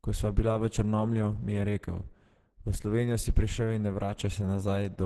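From start to finish the speech sounds muffled and hoarse, with a grainy roughness and nothing above about 12.1 kHz, so a spectrogram shows a flat ceiling there across the whole clip. The likely cause is heavy Opus compression in its hybrid speech mode at a low rate, which fits roughly 12 kbps. Starved of bits, the encoder codes the lower band as speech and fills the band above it coarsely, leaving blurred, noisy texture in the spectrogram's upper region.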